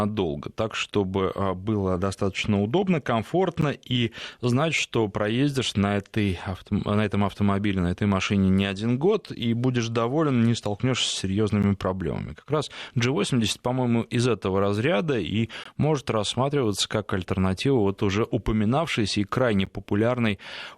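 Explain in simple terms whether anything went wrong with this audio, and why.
A gap between stream segments interrupts the speech at 3.61, 11.63, 15.64 and 19.65 s. Each is a hard-edged silence of 11 to 18 ms, the first just before "и знать что проездишь". The audio arrives in 4-second pieces whose timestamps don't quite meet, so the player fills each hole with silence. No audio is lost.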